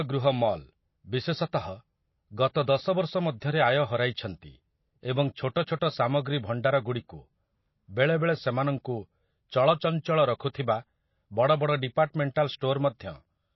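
Throughout the clip the speech sounds dull and watery, with nothing at all above 5.8 kHz and a swirling, unsettled texture in the quieter detail. Consonant attacks come across smeared. The likely cause is MP3 compression at a low bitrate, around 24 kbps. Starved of bits, the encoder has cut the treble off at a fixed point and dropped weak frequency components that flicker in and out from frame to frame. The damage is plainly audible.

At 12.34 s a brief hiss leads into a sharp attack, and the onset itself sounds soft rather than crisp. This is pre-echo, spread over about 16 ms. The codec spreads its quantisation noise across a whole transform block. Because the attack lands late in its block, noise sized for the loud moment also fills the quiet stretch just before it, and it is heard as that short wash of hiss ahead of the sound.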